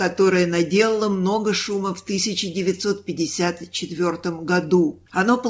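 No technical faults are audible.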